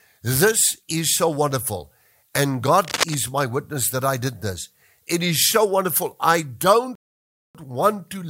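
From 2.82 to 3.15 s, just before "my witness that I", a dense, uneven rustle of scratchy noise rides over the speech, sitting only a little below the speech level. This is cable scratch noise: its crackling, irregular texture points to a worn cable, connector or control being moved, the likely cause being contact resistance fluctuating rapidly at that loose joint and injecting bursts of noise straight into the signal path for that third of a second.

At 6.95 s, right after "is so wonderful I", the speech drops abruptly into complete silence and then picks up at exactly the point where it broke off at 7.55 s. That gap is a rebuffering stall. The player exhausted its downloaded audio and paused until more data arrived. No speech is lost, but the pause inserts about 0.59 s of dead air into the middle of the phrase.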